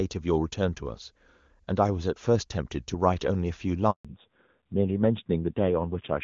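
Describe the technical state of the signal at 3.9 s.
A handover gap runs from 3.91 to 4.05 s. While the call was switched between networks, no speech frames arrived for about 140 ms. The speech fades out within a few tens of milliseconds and falls silent until the new link resumes, so anything said in that window is lost.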